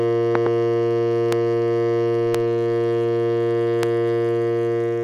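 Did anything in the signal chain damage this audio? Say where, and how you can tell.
Yes. Loud pops land on the music at 0.35–0.49 s (two in quick succession), 1.33–1.35 s, 2.35–2.37 s and 3.83–3.85 s, each peaking roughly 15 dB above the programme. The music carries on unbroken underneath, so these are added voltage pulses, not dropouts or buffer gaps that would chop the sound. The stage is likely analogue wiring, such as a loose connector or static discharge, with the following circuits shaping each step into a thump.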